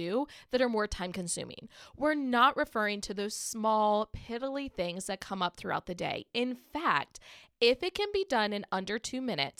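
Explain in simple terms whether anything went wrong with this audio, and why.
Nothing went wrong with this audio: no technical fault can be heard anywhere in the recording.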